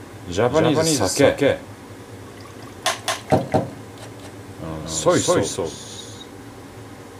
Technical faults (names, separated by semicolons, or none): doubled audio track